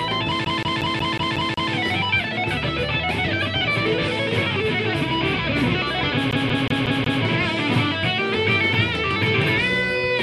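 From 0.45 to 1.72 s the audio sticks like a CD stuck on one turn: a scratch keeps kicking the laser back one track, so the same slice of about 0.18 s replays seven times, each restart marked by a brief mute. The rapid, evenly spaced stutter returns from 6.31 to 7.23 s, this time five repeats of the same 0.18 s loop, before playback moves on.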